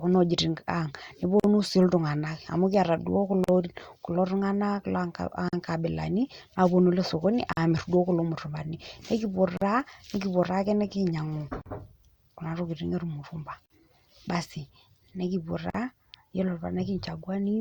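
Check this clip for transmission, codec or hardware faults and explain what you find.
The clip has one recurring fault: a gap at a join of encoded pieces. Short silences open at 1.40, 3.44, 5.49, 7.53, 9.57, 11.62, 13.66 and 15.70 s, each about 43 to 44 ms long and about 2 s apart. The phrase "nkabilani aaponu ale sokoni" sits between the third and fourth gaps. Each 2 s piece was encoded on its own and then joined untrimmed. The encoder's start delay and last-frame padding stay in. The speech drops out abruptly, smeared at the edges, then resumes where it stopped.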